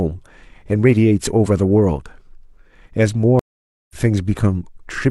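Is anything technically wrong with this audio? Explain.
Yes. At 3.39 s the speech drops out for about half a second, a stream reconnect. The connection broke, the player went silent, then restarted a fresh decoder at a later point, skipping roughly 0.4 s. On a waveform this shows as a flat gap ending near 3.96 s, with speech fading back in.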